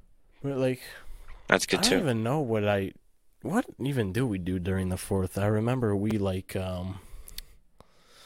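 Twice in this speech clip, fresh audio failed to reach the playback device in time, so it replayed the last buffer it held, a repeated buffer fault. Each repeat is a slice of about 5 ms, consistent with a very small output buffer. At 1.68 s the slice plays one extra time, and at 6.11 s it plays two extra times. Because the buffer is so short, each repeat with its hard joins comes across as a brief click or buzz rather than an audible stutter, and essentially no audio is lost.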